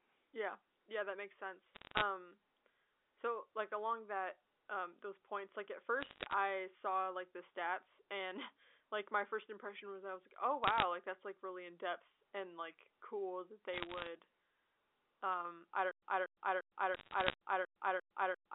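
Bit errors on a digital phone line show up as bursts of sharp ticks and crackle at 1.75–2.02, 6.00–6.34, 10.64–10.83, 13.74–14.07 and 16.95–17.34 s. Roughly half a percent of bits got flipped on the A-law telephone stream, so single samples jump and click.

From 15.91 s to the end there's a stutter with silent gaps. A 235 ms fragment replays seven times, once every 347 ms, with about 112 ms of dead silence between repeats. That's likely a stalled stream retrying its last chunk, and the audio that should have followed is lost.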